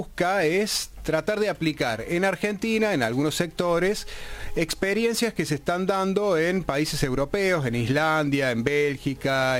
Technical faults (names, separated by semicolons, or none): none